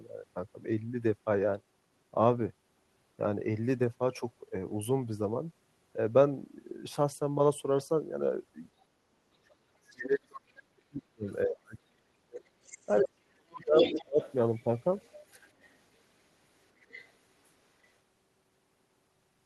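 From 9.43 to 12.51 s, speech is suppressed in double talk, dropping by as much as roughly 40 dB, likely because the echo canceller ducked the talker while the far end spoke. The other side's voice leaks through faintly at 9.87 to 9.93 s and 11.27 to 11.37 s. It returns more clearly at 12.68 to 13.04 s, likely from residual loudspeaker echo the canceller missed. Suppression recurs from 12.86 to 14.21 s. The strongest leak, nearly as loud as the talker, runs from 13.64 to 15.16 s, with fainter scraps at 15.62 to 15.75 s and 16.8 to 17.12 s.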